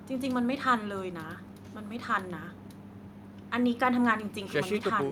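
Nothing in this speech recording stands out as a technical fault, so there's nothing here to point to.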